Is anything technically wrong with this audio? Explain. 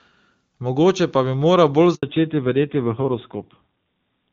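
Yes. There are two faults, and they come one after the other.

At 1.95 s a handover gap begins. The sound stops and stays silent for 80 ms, until 2.03 s. The call was being passed from one network link to another. No speech frames arrived while that switch happened. The audio drops out quickly and returns only once the new link is carrying frames. Whatever was said in that window is gone.

From 2.03 s to the end there is a fallback to narrowband. Before the gap, the call runs over the AMR wideband (HD Voice) codec, and it sounds full and clear. After the gap, nothing remains above 4 kHz. The top of the speech is cut away, so it sounds duller and more boxed in. It is also rougher. That fits a narrowband AMR codec at a low rate, around 7.4 kbit/s.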